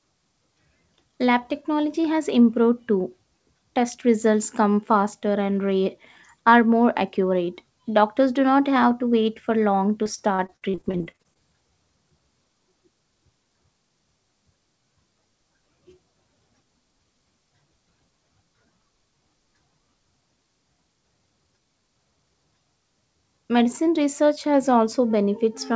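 From 10.04 to 11.37 s the speech breaks up with repeated packet loss, giving a choppy, robotic sound. Short holes follow one another in quick succession, the longest about 51 ms, and each is patched by stretching the preceding sound, so roughly a quarter of that stretch, some 360 ms in total, is synthetic fill. Content above 8 kHz is absent throughout, consistent with a wideband G.722 call path.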